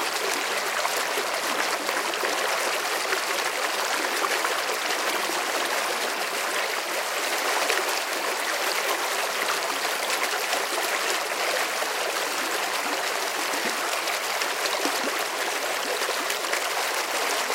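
No technical faults are audible.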